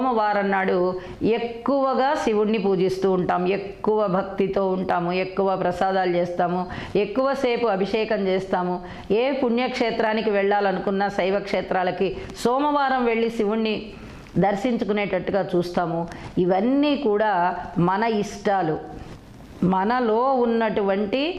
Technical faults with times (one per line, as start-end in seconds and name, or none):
none